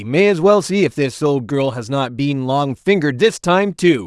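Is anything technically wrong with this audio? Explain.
No, nothing in this speech recording stood out as technically wrong on listening.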